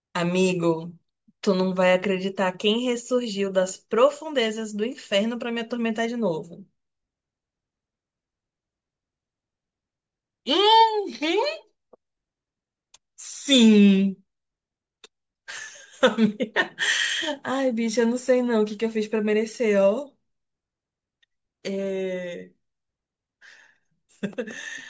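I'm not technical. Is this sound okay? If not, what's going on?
Yes, the recording has no technical faults that can be heard anywhere in it.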